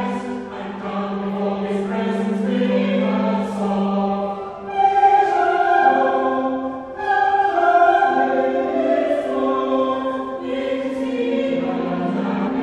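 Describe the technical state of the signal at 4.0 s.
At 4.0 s the signal is intact, with no audible fault at that point.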